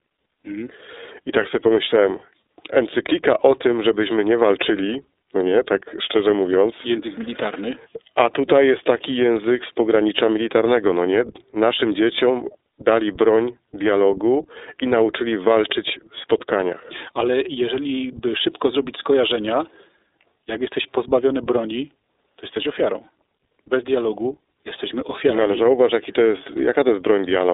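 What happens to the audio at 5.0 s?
At 5.0 s the speech carries the same iLBC codec coloration present across the whole clip rather than a distinct event. The band is confined to roughly 300 Hz to 3.7 kHz, with nothing above 3.8 kHz, so sibilants sound dull. Each 30 ms frame's excitation is coded independently, leaving a plainly audible rough, slightly synthetic texture that fits the 13.33 kbps mode.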